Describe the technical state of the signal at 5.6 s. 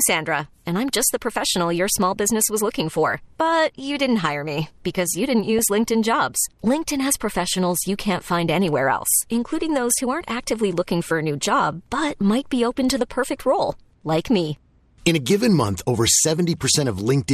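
At 5.59 to 5.66 s the speech is hit by DAB burbling. Bit errors that slipped past error correction scramble sample values and scale factors, so single sub-bands jump in level. The result is brief blips of noise. On a spectrogram this shows as isolated bright horizontal patches, and the span fits about four damaged frames.

Underneath, the whole signal carries plainly audible MP2 compression, likely from a low-rate stream of around 80 kbps. Starved upper sub-bands switch off and the remaining ones are coarsely quantised, giving dull, granular speech. A spectrogram shows a ragged, flickering top edge with blocky gaps.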